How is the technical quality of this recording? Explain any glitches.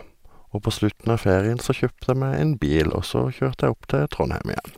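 No glitches or technical faults.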